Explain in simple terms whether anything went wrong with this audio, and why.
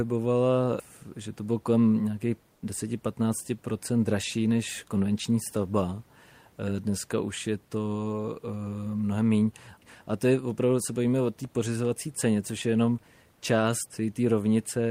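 Onset clipped by the voice detector, at 2.59 s, just after "to bylo kolem nějakých": the next sound begins abruptly, missing its soft start. The likely cause is the sending side's voice detector reacting too slowly when sound resumed after a pause, so about 20 milliseconds at the start weren't transmitted and the receiver filled the gap with quiet background hiss instead. The faint room noise heard throughout comes from the recording space itself.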